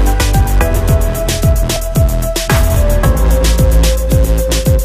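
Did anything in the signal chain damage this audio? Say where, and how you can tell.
Yes, there is overlap between stream segments at the network and playback stage. Neighbouring segments, which fit a 1-second segment length, carry timestamps that overlap, so the player discards the overlapping portion even though that audio was never duplicated. About 6 ms and 16 ms of sound disappear at the two joins, and the waveform jumps across the gap. This is heard as a brief click or tiny skip at 1.76 s and again at 2.75 s, about one segment apart.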